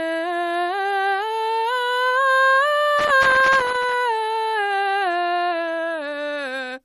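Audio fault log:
Throughout: MP3 compression. The music was likely squeezed through a low-bitrate MP3 encoder, which fits about 40 kbps. Short of bits, it cuts everything above 15.1 kHz and drops weak frequency lines frame to frame, giving a plainly audible watery swirl and smeared attacks.
2.99 to 3.94 s: loose connector crackle. A worn or dirty contact in the signal path makes and breaks over and over, chopping the signal on and off, heard as an irregular burst of crackle and scratching for just under a second.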